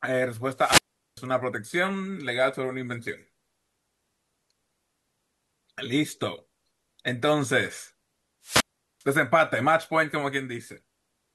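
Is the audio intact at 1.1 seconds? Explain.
No, 1.1 s falls inside a wireless microphone squelch dropout from 0.55 to 1.25 s. Hiss rises as the FM signal fades, then squelch mutes about 395 ms, unlike a clean digital gap.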